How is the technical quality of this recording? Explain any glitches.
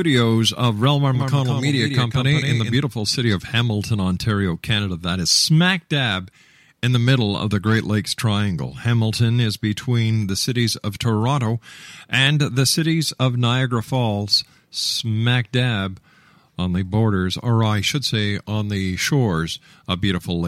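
Between 1.15 and 2.75 s, just before "city of", the speech has a doubled audio track. The likely cause is that the same signal reached the mix twice, once through a slower path or through an edit that left two copies out of step. A full-band copy, about 5 dB quieter, trails roughly 150 ms behind. Because that copy carries no decay or room colour, it sounds like a clean echo of each syllable. It cuts in and out abruptly at both edges.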